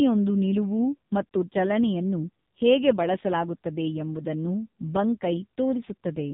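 From start to finish the speech carries the sound of the AMR narrowband mobile codec, heavily degraded. Everything above 4 kHz is missing, so the voice sounds boxed-in and phone-like, and the sparse pulse excitation leaves it buzzy and synthetic. The harshness fits a low AMR-NB mode near 5.9 kbps. On a spectrogram, energy stops at a flat ceiling at 4 kHz, with smeared, blocky harmonics repeating in 20 ms frames.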